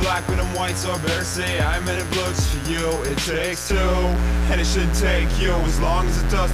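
From start to finish, a mains buzz at 60 Hz runs under the audio, sitting roughly 15 dB below the wanted signal. Sharp switching spikes, of the kind a dimmer or rectifier produces, are getting into the signal path twice per mains cycle. The result is a steady, raspy buzz. On a spectrogram it shows as evenly spaced horizontal lines at multiples of 60 Hz stretching up to several kHz. A zoomed waveform shows regular spikes about every 8.3 ms.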